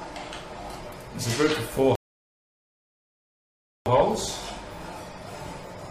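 At 1.95 s the sound drops to silence and stays there until 3.86 s. This is a rebuffering stall. The player ran out of downloaded audio and paused until more arrived. Playback then resumes exactly where it stopped. Nothing is skipped, but about 1.9 s is added.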